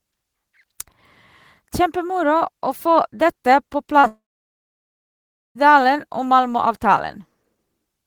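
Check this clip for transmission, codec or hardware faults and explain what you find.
Two transmission faults sit back to back in the speech, just after the four-second mark.

From 3.99 to 4.05 s there is a short concealed packet loss. About 40 ms of audio failed to reach the decoder in time, and the receiver covered the gap by extending the preceding sound, then crossfading back into real audio. It comes across as a brief smear or wobble.

Right after, from 4.07 to 5.57 s, comes a long network dropout lasting about 1.5 s. Its likely cause is a stretch where no packets arrived at all. The concealment briefly carries the last sound forward as a fading buzz or hiss, then gives way to roughly 1.35 s of silence before the speech returns with the missing portion gone. A spectrogram shows a short decaying smear followed by an empty band across all frequencies. The waveform tapers into a flat line.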